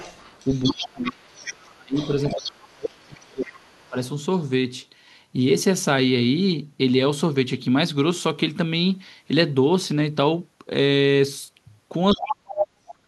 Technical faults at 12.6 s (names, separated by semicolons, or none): other side's voice leaking through; speech suppressed in double talk